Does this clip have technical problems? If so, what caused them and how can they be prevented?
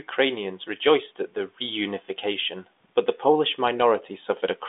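No, this clip has no technical problems.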